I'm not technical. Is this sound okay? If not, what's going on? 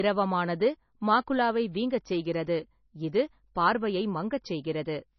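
No. For the whole clip the speech sounds dull and muffled, as if heard through a wall, with nothing above about 6 kHz. This is likely low-bitrate audio saved at a high bitrate: a heavily squeezed file re-saved larger, which can't restore the lost detail.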